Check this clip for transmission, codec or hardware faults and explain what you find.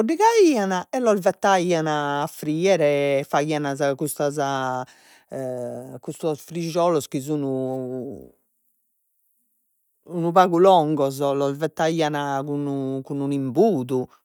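No faults found in this recording.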